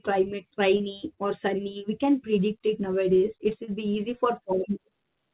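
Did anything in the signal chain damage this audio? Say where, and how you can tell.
Yes, at the network stage, as short concealed packet loss. At 0.77 s and again at 3.65 s, the sound briefly smears and wobbles for roughly 25 to 30 ms. About 30 ms of audio failed to reach the decoder in time at each point. The receiver covered each gap by extending the preceding sound, then blended back into the real signal. The narrowband call path, with nothing above 4 kHz, remains audible throughout.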